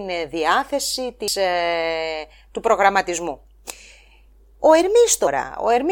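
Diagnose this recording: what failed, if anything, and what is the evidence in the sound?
The speech skips ahead at the codec stage: compressed frames skipped. At 1.28 s, right after "ε διάθεση", roughly 200 ms of audio vanishes, about two frames of 92.9 ms each. At 5.27 s a single frame, about 100 ms, drops out. Each time the audio jumps ahead by the length of the frames left out. On a spectrogram the harmonic tracks jump discontinuously. The waveform shows no gap, just an abrupt change in envelope.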